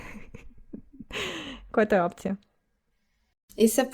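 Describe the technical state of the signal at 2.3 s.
At 2.3 s the speech signal is intact, with no audible technical fault at that moment.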